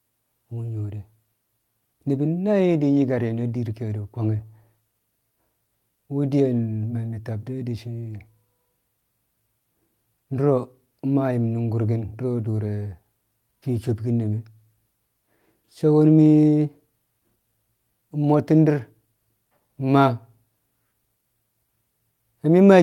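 Nothing in this speech recording trips a technical fault anywhere along its run, so there's really nothing to walk through in time order.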